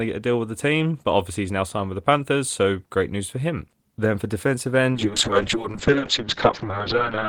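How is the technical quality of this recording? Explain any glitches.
A call bitrate drop starts at 4.93 s, right after "for defensive", and lasts to the end of the clip, about 2.4 s. The call's bandwidth estimate fell, so the Opus encoder was given far fewer bits. The coarser coding sounds like a fall from roughly 32 kbps to around 10 kbps. The encoder also narrowed its audio band from 20 kHz to 6 kHz, so the speech turns muffled and rough, losing its crisp top end.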